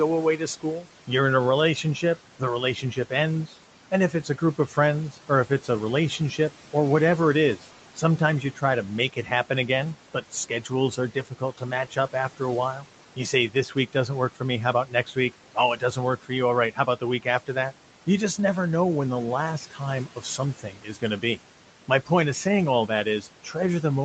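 Noise suppressor artifacts run through the whole clip. The suppressor pulls the steady room noise down by about 12 dB between phrases and lets it rise under speech. On a spectrogram the noise floor visibly pulses in step with the speech.

Speech cut by the noise suppressor occurs at 0.37 to 1.09 s; at 1.83 to 6.2 s, after "in a" and before "or whatever it"; at 7.57 to 9.31 s; at 10.22 to 17.73 s; at 19.71 to 22.1 s, after "know when the last" and before "of saying all"; and at 22.88 to 23.55 s, after "of saying all". In each span the suppressor mistakes part of the speech for noise and ducks it by about 8 to 13 dB, so it sounds swallowed. On the waveform these show as brief sags, and on the spectrogram as faint detail that is missing.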